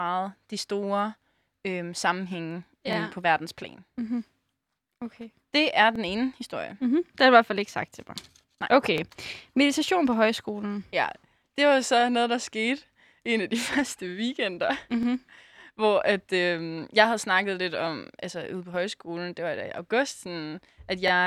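The speech was handled in 3-second chunks that overlap, with each new chunk starting about 25 ms before the previous one finished. This is an overlapping chunks fault, so that 25 ms sliver plays twice at every join, heard as a click or stutter every three seconds: at 2.93, 5.96 (just before "ene historie"), 8.98, 12.01 (between "det var" and "noget der skete en"), 15.03, 18.06 (between "havde snakket lidt om" and "altså ude på højskolen") and 21.08 s.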